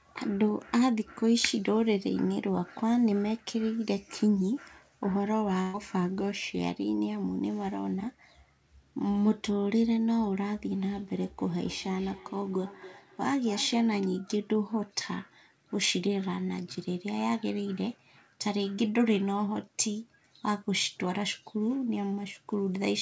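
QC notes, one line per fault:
5.62–5.76 s, burst of packet loss: about 120 ms of audio never arrived, so the receiver stretched the last sound across roughly 116 ms, fading it, then jumped ahead. On a spectrogram, frozen horizontal bands dim out, then a hard discontinuity where content resumes.
11.06–14.05 s, feedback echo between two devices: a second device in the room replays the call and its microphone sends it back, bypassing either echo canceller. Each phrase returns at about 300 ms intervals, around 18 dB below the direct speech, thinner and ringier, visible as faint shifted copies trailing each syllable.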